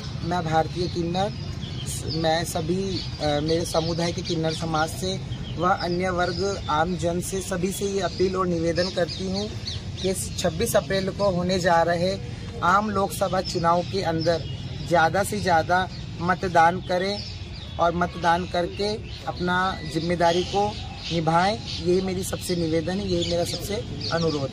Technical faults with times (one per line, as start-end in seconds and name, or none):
none